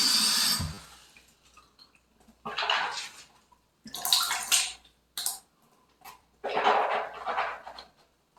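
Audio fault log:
0.74–0.78 s, 4.25 s and 6.22 s: repeated buffer. About 10 ms of sound replays because fresh audio arrived late, several times at 0.74 s and once at the others, which fits a 10 ms buffer. It sounds like a brief buzz or click, with identical waveform segments and hard joins that show as thin vertical lines on a spectrogram.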